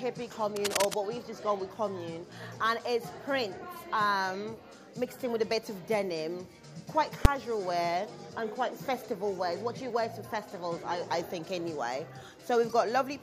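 The audio carries two technical faults. From 0.56 to 0.94 s there is cable scratch noise: dense, uneven scratching and rustling sits over the sound at roughly the same loudness as the sound itself. The likely cause is a worn cable, connector or control being moved so that its contact resistance jumps about rapidly. On a spectrogram this shows as a ragged band of broadband noise that flickers across the whole frequency range. In the waveform it appears as irregular, spiky fuzz riding on the signal. At 7.25 s a single loud bang marks invalid numbers at full scale. For about 5.8 ms, which fits a 256-sample processing block, a calculation produced infinite or invalid values, and the output was pinned at one extreme value. The waveform shows this as a short, flat-topped slab far beyond the audio's peaks. The spectrogram shows a thin vertical stripe of energy spanning all frequencies.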